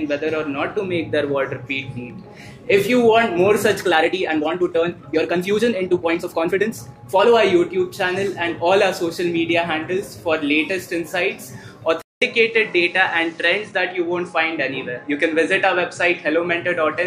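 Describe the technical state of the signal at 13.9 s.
At 13.9 s the system has most likely switched its input to a poorer device. The switch came at 12.02 s, and that input carries through to the end of the clip at 17.06 s. A 200 ms silence marks the switch. From there the sound passes a narrower band, which takes the air and sparkle off the top, and a faint new background noise sits well beneath it. The overall level stays much the same.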